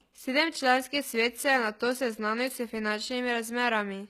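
Throughout the speech, the upper frequencies sound gritty and plainly metallic, and s sounds come out lispy. Nothing is present above 14.9 kHz. This is likely HE-AAC compression. Its treble is rebuilt from copied lower bands, consistent with a bitrate near 20 kbps.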